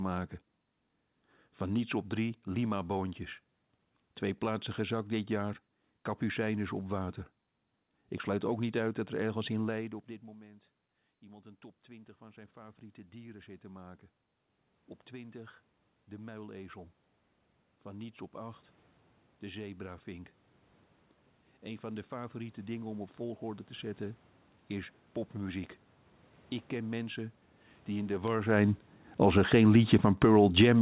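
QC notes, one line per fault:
10.39–13.97 s and 21.61–25.18 s, automatic gain rising: the gain control, answering a quieter input after the talker moved back around 9.5 s, raised its gain by about 7 dB and later about 4 dB, so voice and room noise swell together.
28.49–30.81 s, automatic gain falling: after the talker moved around 28 s, the gain control found the input too loud and pulled its gain down, so the sound starts loud and sinks with its background to the end.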